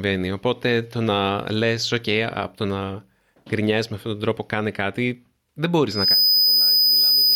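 From 5.89 s to the end of the speech, a loudspeaker feedback squeal rises at 5 kHz, swelling within about a third of a second to roughly 5 dB above the voice. The microphone is re-amplifying its own loudspeaker. Unlike a steady interference whine, it builds from nothing before holding at that level.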